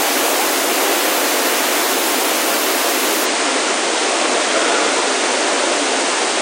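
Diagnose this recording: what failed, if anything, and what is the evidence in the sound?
The failure is at the network and codec stage: the adaptive stream dropped to a lower bitrate at 3.25 s and stays there to the end. The switch is abrupt with no gap. Everything above about 9.6 kHz vanishes, and codec artefacts rise. That's the encoder starving for bits and throwing away treble. The cutoff and the artefacts fit a step down from around 96 to around 32 kbit/s AAC.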